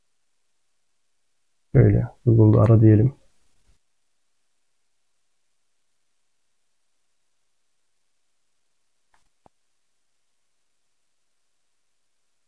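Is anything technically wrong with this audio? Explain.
No, nothing is technically wrong with this audio.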